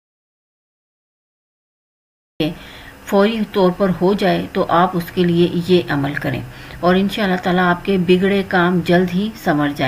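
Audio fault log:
0.0–2.4 s: audio dropout to silence, already under way as the clip opens. The first 2.4 s are silence with no room tone, likely because the input was lost and silence was written. The waveform sits flat and the spectrogram stays blank until the sound cuts in abruptly.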